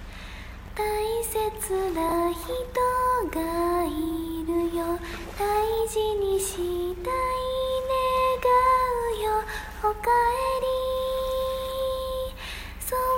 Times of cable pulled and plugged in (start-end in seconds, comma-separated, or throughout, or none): none